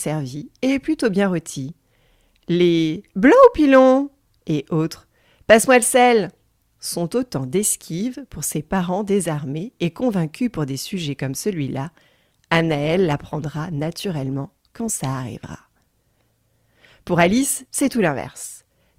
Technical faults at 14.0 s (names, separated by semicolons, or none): adaptive stream at a lower bitrate